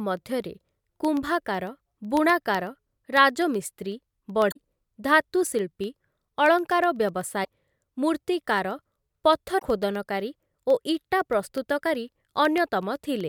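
From 0.17 s to 13.21 s, something in the system stalls the USB link or the audio driver every 0.125 s, and each stall loses a sliver of audio, well under a millisecond, which is filled with silence. These periodic USB or driver dropouts are heard as a steady ticking, eight clicks per second, running through the speech and audible only where there is signal to interrupt.

Three times the compressed stream itself carries damaged data: 4.48 to 4.57 s, 7.41 to 7.47 s, and 9.55 to 9.63 s. At each point the decoder meets bytes it cannot parse correctly, loses frame sync, and hunts for the next valid header. For those few hundredths of a second the speech gives way to a brief chirp, squawk, click or short hole before normal decoding resumes.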